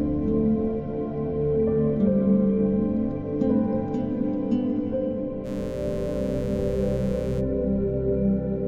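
At 5.43 s a mains buzz cuts in. It lasts two seconds and stops at 7.43 s. Sharp switching spikes from the power supply have leaked into the signal path, arriving twice per cycle of 60 Hz mains. That gives a fast, regular pulse with harmonics stacked up into the kilohertz range. It sits roughly 20 dB below the main sound. It is heard as a steady, raspy buzz, not a smooth hum.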